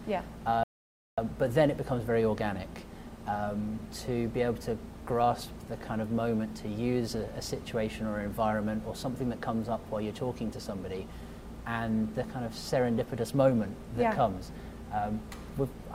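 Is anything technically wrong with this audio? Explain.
Yes. At 0.63 s there's a rebuffering stall: the player ran dry, went silent for about 0.54 s, then picked up at 1.18 s exactly where it stopped.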